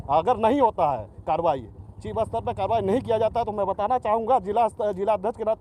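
No technical faults can be heard, so there are none to describe in time order.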